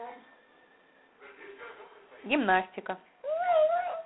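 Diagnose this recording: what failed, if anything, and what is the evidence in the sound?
A harsh, rasping hiss follows the speech level throughout, with nothing above 3.9 kHz. This is G.726 ADPCM codec damage: coarse prediction-difference coding that fits 24 kbit/s.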